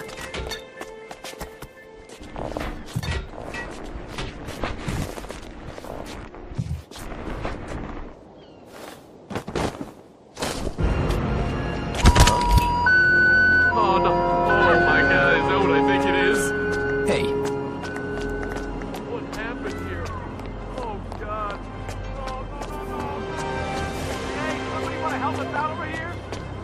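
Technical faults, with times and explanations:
No technical faults are audible anywhere in this recording.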